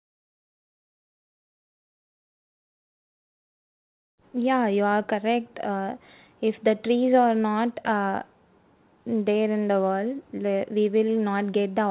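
No technical faults can be heard in the speech, which carries the narrow telephone-band sound of a call path with nothing above 4 kHz, consistent with G.711 mu-law coding at 64 kbps.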